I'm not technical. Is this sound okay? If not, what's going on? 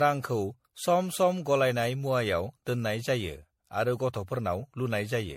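No. The speech sounds swirly, hollow and smeared throughout, with blurred starts to sounds. This is likely generation loss from being saved as MP3 about seven times over.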